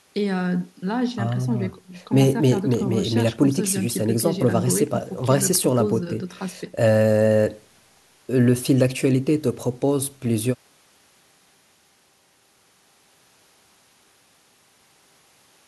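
Speech throughout, with no audible dropouts, clicks, distortion, level jumps or other technical faults at any point.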